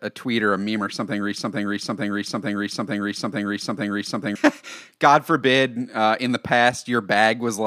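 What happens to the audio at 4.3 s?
At 4.3 s the speech is still caught in a broken-record loop: from 1.38 s to 4.36 s a 449 ms fragment repeats back to back seven times, likely because playback stalled and resent its last buffer.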